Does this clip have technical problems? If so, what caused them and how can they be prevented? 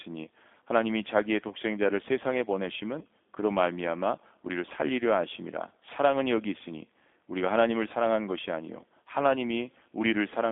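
Yes. Throughout, the speech sounds thin, rough and slightly synthetic, confined to roughly 200 Hz to 3.5 kHz. This is G.729 codec damage, which fits an 8 kbit/s model-based coder. To prevent it, use a wideband codec such as G.722 or Opus when the line permits.

At 1.48 to 1.53 s and 2.99 to 3.05 s, the sound briefly turns buzzy and smeared, then recovers weakly. This is VoIP packet loss concealed by the speech codec: the decoder extrapolated and faded its last frames, which fits a single lost 20 ms packet each time. To prevent it, improve network stability, prioritise voice traffic with QoS, and add forward error correction or redundancy.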